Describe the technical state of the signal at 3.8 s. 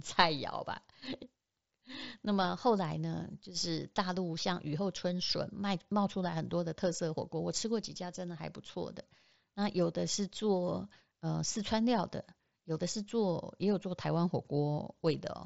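At 3.8 s the speech is intact, with no fault, and it comes through the Bluetooth mSBC headset path, which carries it up to 8 kHz with only the light grain that codec leaves on louder sounds.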